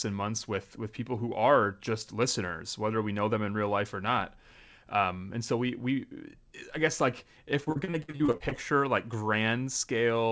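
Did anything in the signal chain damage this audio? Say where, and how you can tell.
Yes, repeated packet loss (robotic sound) at the network stage, from 7.64 to 8.61 s, right after "i guess like if". About a dozen short holes punch through that second, the longest 58 ms. Roughly 340 ms is patched by stretching the preceding sound, giving a choppy texture over about 35% of the span. Another 360 ms simply drops out. Behind it, the call path's 8 kHz ceiling points to a G.722 wideband link.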